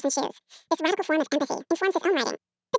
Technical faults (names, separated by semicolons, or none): wrong sample rate